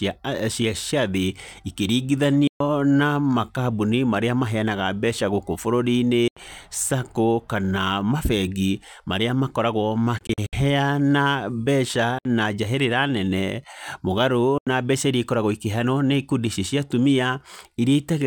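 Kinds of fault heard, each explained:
Bluetooth dropout: The wireless link likely failed to deliver audio packets to the headphones in time, so they were discarded and the output went silent until good data arrived. The speech breaks off abruptly five times, at 2.47 s just before "na makambuni marĩa maheyanaga", 6.28, 10.18, 12.18 and 14.58 s. Most gaps last 64 to 128 ms. The one after "kana mabengi marĩa makoragwo" is a scattered cluster spread over 0.34 s. Each time, speech resumes further along, as though it had kept playing.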